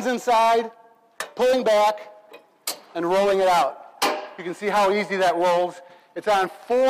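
No technical faults can be heard anywhere in the recording. Nothing in the audio calls for a fault to be described here.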